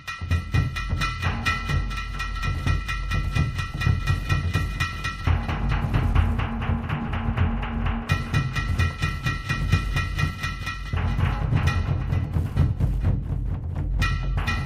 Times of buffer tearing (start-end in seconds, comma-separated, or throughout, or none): none